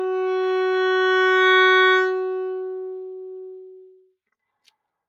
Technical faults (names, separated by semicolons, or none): noise suppressor applied to music or sounds